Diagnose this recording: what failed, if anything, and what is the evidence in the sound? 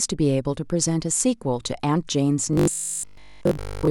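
From 2.53 s to the end, the speech becomes robotic sound from repeated short buffers, a rigid 50 Hz metallic buzz. A driver buffer likely underruns, replaying 20 ms blocks throughout. A spectrogram shows flat harmonics spaced 50 Hz apart, and the waveform shows near-identical 20 ms cycles.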